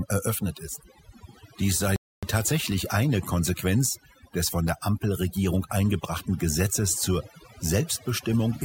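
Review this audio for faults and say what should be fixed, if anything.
Throughout, the background is near-silent and flecked with twinkling specks: overdone noise removal, where an over-aggressive reducer mutes frequency bands near its noise estimate and takes quiet speech detail too. Use a gentler reduction setting on the noisy source so it lowers the noise floor without gating individual bands.

From 1.96 to 2.23 s the sound cuts out for about 0.27 s, then resumes with "tatsächlich eine". This is a playback stall, likely the player running short of data or its thread being blocked. Give the player a larger buffer and keep its audio thread free of blocking work.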